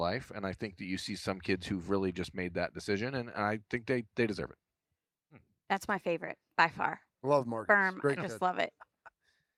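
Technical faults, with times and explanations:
No technical faults can be heard anywhere in the speech recording, and the signal holds steady with nothing to flag.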